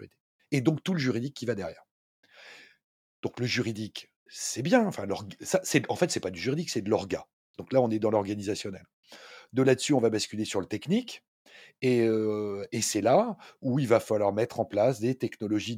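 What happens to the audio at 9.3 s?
Nothing goes wrong at 9.3 s; the speech carries on through that moment without any audible dropout, distortion or other fault.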